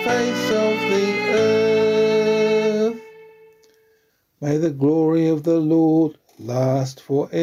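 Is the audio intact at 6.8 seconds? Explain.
No. At 6.8 seconds the sound is affected by gain pumping, which runs through the whole clip. The level swings by roughly 5 dB, pulled down under each loud sound, leaving loud and soft parts squashed together. The likely cause is gain set far too high, with a fast limiter or compressor pulling it back on every peak. Unlike a noise gate, which cuts the quiet parts off, this lets the gain recover between peaks.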